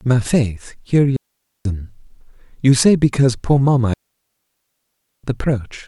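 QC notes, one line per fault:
1.16–1.65 s and 3.94–5.24 s: digital wireless dropout. The receiver mutes for 0.49 s, then 1.3 s, leaving clean near-silence with quick fades and no hiss, static or noise burst.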